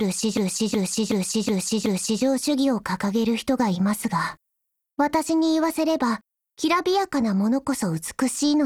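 From 0.37 to 2.23 s a system hang loop occurs: the system froze while the sound hardware kept replaying its ring buffer. A 0.37 s slice, which fits a 16384-sample buffer, repeats five times at about 2.7 Hz, giving a slow, exact stutter.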